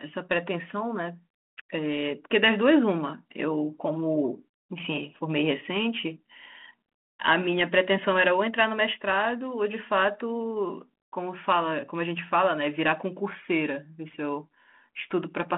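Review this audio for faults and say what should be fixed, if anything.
Nothing here needs fixing: the speech sits in a telephone band of roughly 200 Hz to 3.4 kHz and carries only the light coding texture expected of G.726 ADPCM running at 32 kbit/s, the rate used by DECT cordless phones.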